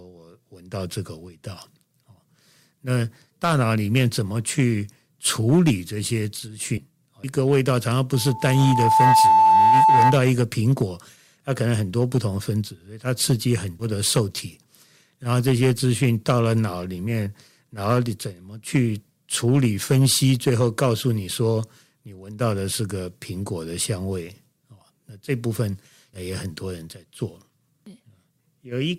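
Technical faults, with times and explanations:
Throughout, hard clipping: speech peaks crackle and fuzz harshly, because the signal is driven about 10 dB past what the chain can pass, flattening the tops.
6.77 s, 13.79 s and 26.13 s, compressed frames skipped: speech jumps ahead, about 70 ms at the first two and 200 ms at the last, as whole 20 ms frames go unplayed.
8.14 to 10.20 s, loudspeaker feedback squeal: a steady 879 Hz tone swells over about a second to roughly 10 dB above the speech, because microphone-to-loudspeaker loop gain exceeds one there.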